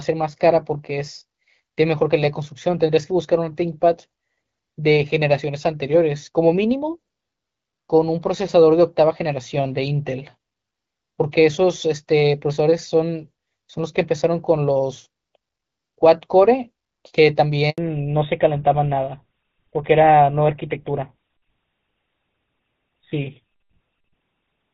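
At 17.70 s there's a handover gap: the call gets passed between networks and no speech frames arrive while it switches over. The sound fades out fast and sits silent for about 80 ms, until 17.78 s, and whatever was said in that stretch is simply gone.

Right after, from 17.78 s to the end, you get a fallback to narrowband. The light, clear HD Voice sound, which fits AMR-WB at 12.65 kbit/s, gives way to something duller and rougher with nothing above 4 kHz, which sounds like GSM full rate took over.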